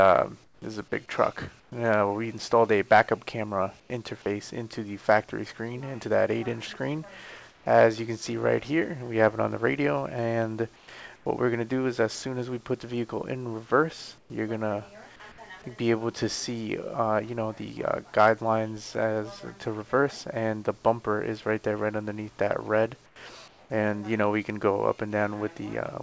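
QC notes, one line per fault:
0.44–0.62, 1.60–1.72, 3.80–3.90, 7.50–7.66, 10.76–11.26, 14.18–14.30 and 23.06–23.70 s, comfort noise in place of the background: in the gaps, the real background, sitting about 30 dB under the loud parts, turns into flat, featureless hiss, dipping about 3 to 10 dB. It's likely the sender going quiet during silence and the receiver filling in synthetic noise, over a call path that leaves nothing above 8 kHz.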